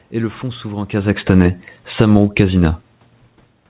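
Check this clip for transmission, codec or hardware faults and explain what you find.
One system fault is audible: automatic gain falling, from 0.95 to 2.21 s. The automatic gain control judged the input too loud, or its background noise too strong, and pulled its gain down by about 13 dB over that stretch, so the speech starts loud and then sinks steadily, with the room noise behind it sinking at the same rate.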